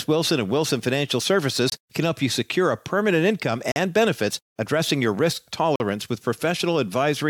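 Gaps between stream segments open at 1.70 s, just before "can help you secure" (24 ms), at 3.72 s between "secure a permanent income" and "benefits addressing your risk" (43 ms), and at 5.76 s after "benefits addressing your risk" (43 ms). Segment timestamps don't quite meet, so the player inserts silence: hard-edged dropouts in the speech, with nothing missing.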